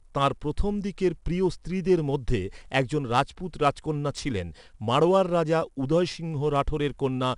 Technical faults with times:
0.00-7.38 4-bit ADPCM compression

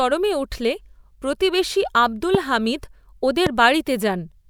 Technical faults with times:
2.35-2.37 loud pop
3.46-3.49 loud pop

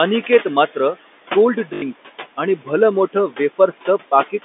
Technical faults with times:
0.00-4.44 noise suppressor artifacts
1.74-1.82 packet loss with last packet repeated

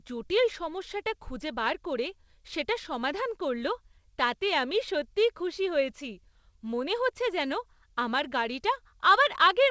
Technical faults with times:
none

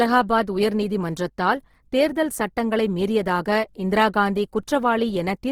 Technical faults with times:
0.00-5.51 Opus compression

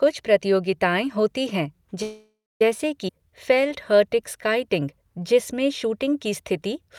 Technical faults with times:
2.02-2.62 call audio freeze
3.08 skip ahead
3.12-4.59 jitter buffer slow-down

